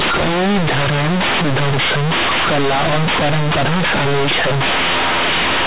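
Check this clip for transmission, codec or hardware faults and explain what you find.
One fault runs throughout: companded audio read as linear. A-law bytes play as raw 8-bit samples, unexpanded. Speech turns loud, buzzy and distorted, with strong noise in pauses. The underlying G.711 A-law coding at 8 kHz holds everything below 4 kHz.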